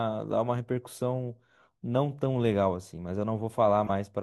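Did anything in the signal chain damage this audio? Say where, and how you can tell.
Yes. The damage happened at the codec stage: a corrupt frame was decoded. From 3.85 to 3.90 s, a short glitch of misplaced energy cuts through the speech. It lasts about 56 ms, which fits roughly two compressed frames. Bits in those frames were flipped, but the decoder played them anyway. Misread gains and codes pushed energy into the wrong frequencies. The error peaks at around -15 dBFS.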